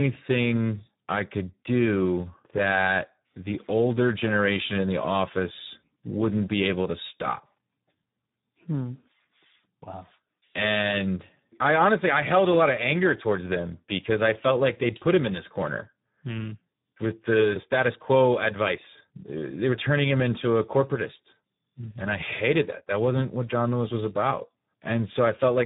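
From start to finish the speech runs through the Speex codec at a very low setting, and it shows. The sound is hoarse and buzzy, with a robotic edge because the codec has almost no bits left to describe the excitation behind each sound. The damage is heavy, which fits a rate of around 8 kbps. There's also nothing above 3.8 kHz, so the whole thing sounds narrow and telephone-like.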